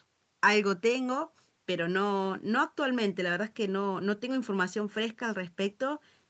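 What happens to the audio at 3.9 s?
At 3.9 s the speech carries on intact, with nothing breaking into it beyond the usual shaping of a call microphone, which trims the lowest bass and leaves nothing above 8 kHz.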